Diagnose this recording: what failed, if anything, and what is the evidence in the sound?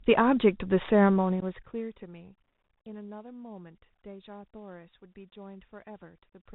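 Codec stage: the Bluetooth CVSD headset codec band-limits the speech throughout, with nothing above 4 kHz on the spectrogram, granular hiss beneath, and scratchy s sounds where the adaptive step can't keep up.

Network stage: unconcealed Bluetooth headset packet loss at 1.40 to 1.44 s leaves a hole of about 15 ms, roughly a couple of packets, seen as a flat gap with abrupt edges in the waveform.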